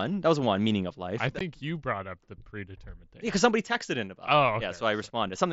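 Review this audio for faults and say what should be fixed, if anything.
Unconcealed Bluetooth headset packet loss occurs at 1.39 s, between "meaning of life I" and "you brought up the". The speech drops out for about 15 ms, which fits two lost voice frames on the headset link. The gap was filled with silence or an idle pattern instead of a concealed estimate, so the hole has hard edges where the signal cuts out and returns. The mSBC wideband coding is audible as a light grain on louder syllables. To prevent the dropout, improve the radio link margin and enable packet loss concealment on the receiving side.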